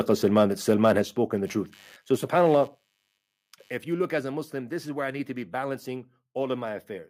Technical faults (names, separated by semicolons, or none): microphone overload; microphone volume stepped down; computer activity noise